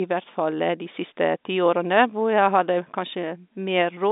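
No faults detected; the speech occupies a telephone band of roughly 200 Hz to 3.7 kHz with nothing above 3.8 kHz, as expected of G.711 telephone coding.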